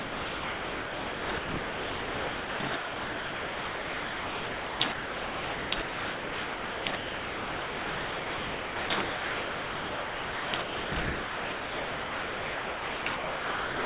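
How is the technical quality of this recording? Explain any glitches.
The recording is heavily degraded by sound chopped by the voice detector across the whole clip, from 0.0 to 13.85 s. About 12.9 s of it is replaced by a steady synthetic hiss, so the real sound survives only in short fragments that switch abruptly with the fill. The likely cause is the sender's voice activity detector repeatedly deciding the input was silence and sending comfort-noise parameters instead of audio, as RFC 3389 does. Unlike packet loss, the gaps are not dead air or smeared repeats. Unlike a noise gate, they are not true silence. They are a flat, featureless background. The call path also limits everything to below 4 kHz, as G.711 A-law does at 64 kbps, which makes the surviving fragments sound dull.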